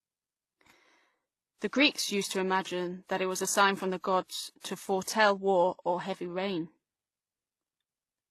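Throughout, the speech has stacked codec artefacts and nothing above 12.3 kHz, a flat spectrogram ceiling, likely from transcoding between lossy codecs.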